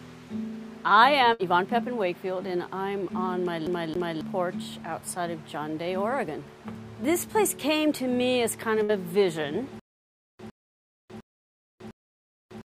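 At 1.33 s a burst of packet loss hits: roughly 60 ms of audio never arrives, and the receiver spends about 57 ms stretching and fading the last sound into a brief buzz or hiss before playback resumes further along.

From 3.67 to 4.21 s the CD is stuck on one turn. A 272 ms section plays twice more in quick succession, with a tiny mute at each jump, as the laser is thrown back to the same spot.

At 8.83 s a second burst of packet loss repeats the first: about 60 ms is missing, bridged by the same short concealment that decays before the sound picks up again.

From 9.79 s to the end there is a stutter with silent gaps. A 107 ms fragment returns four times, every 705 ms, with about 600 ms of dead digital silence between. This is likely a stalled player or stream retrying its last buffer and running empty, and the audio meant for those gaps is gone.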